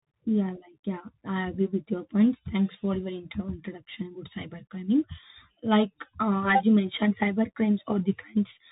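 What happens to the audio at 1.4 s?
At 1.4 s the speech is passing through a Bluetooth CVSD headset codec, as it does for the whole clip. One bit per sample tracks the wave up or down, which fits a 64 kbps link. Nothing above 4 kHz survives. Sibilants turn scratchy, and a granular hiss sits underneath.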